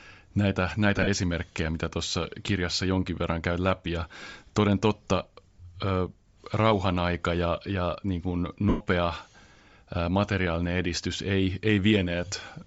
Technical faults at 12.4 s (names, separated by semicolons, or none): Bluetooth LC3 compression